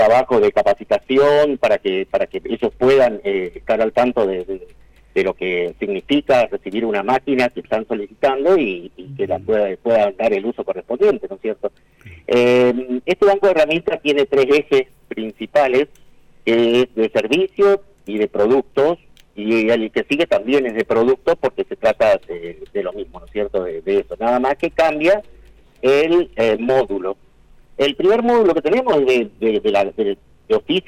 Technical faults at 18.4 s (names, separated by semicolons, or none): none